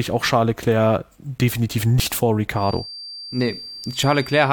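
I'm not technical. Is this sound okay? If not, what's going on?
No, there are two problems.

At about 1.98 to 2.03 s there's a quick glitch where a little of the speech is missing, roughly 70 milliseconds. This is compressed frames skipped: the file is stored as small chunks of audio, and some of them were lost or thrown out as damaged. Playback simply jumps ahead.

From about 2.5 s to the end there's a thin, steady whistle at around 4.7 kHz, a high pitch sitting quietly underneath the speech and wobbling a bit in loudness. This is a feedback whistle. The likely cause is sound from a loudspeaker leaking back into the microphone and hovering right at the edge of feedback, so that one high tone keeps ringing without building into a full howl.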